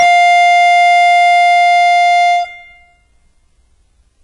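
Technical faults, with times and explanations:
Throughout, HE-AAC compression: the music's treble sounds gritty and metallic, and nothing reaches above 10.7 kHz. This is likely spectral band replication copying lower bands upward, fitting a bitrate near 12 kbps. A spectrogram shows blocky repeated upper bands ending in a hard ceiling.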